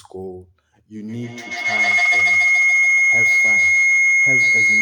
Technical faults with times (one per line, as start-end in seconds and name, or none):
1.08-4.81 feedback howl